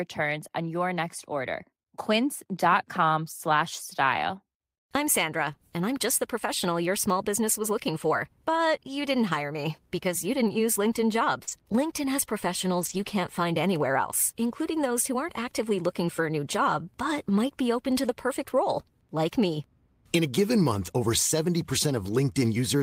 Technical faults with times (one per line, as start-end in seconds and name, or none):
11.43-11.49 short concealed packet loss
11.47 lost packet rebuilt from error correction
12.81-13.07 lost packet rebuilt from error correction